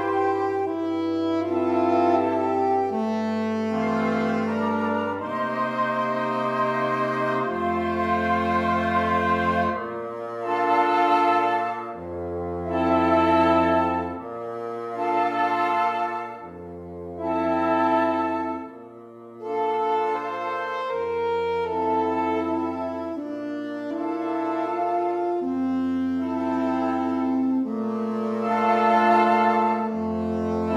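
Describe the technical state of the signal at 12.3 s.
At 12.3 s the signal is intact, with no audible fault at that point.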